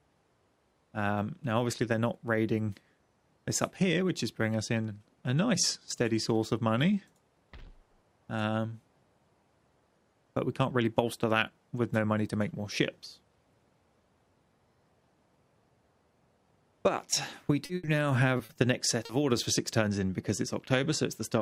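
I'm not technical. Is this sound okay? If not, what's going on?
No. Between about 17.6 and 19.1 seconds the connection dropped pieces of audio, and the receiver had to paper over the gaps.

Short concealed packet loss occurs at 17.65, 17.85, 18.37, 18.45, 18.53 and 19.05 s: gaps of 20 to 40 ms patched by extending the preceding sound, heard as brief smears or wobbles.

A burst of packet loss runs from 17.75 to 17.85 s: about 80 ms went missing, filled by a fading continuation of the previous sound before the real audio picks up further along.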